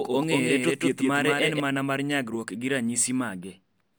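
From the start of the clip to 1.6 s there is a doubled audio track: a second, full-band copy of the speech trails the original by roughly a fifth of a second, a few decibels quieter, with no decay or room colour. The likely cause is the same signal arriving twice, via a slower capture path or an edit holding two out-of-step copies. The copy cuts out abruptly at 1.6 s, just before "mana mar nyagruok gi".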